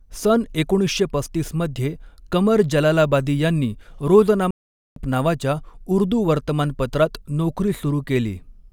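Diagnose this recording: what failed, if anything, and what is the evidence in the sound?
A playback stall silences the speech from 4.51 to 4.96 s, about 0.46 s. It resumes at "नावाच्या उर्दू". The player likely ran out of buffered data.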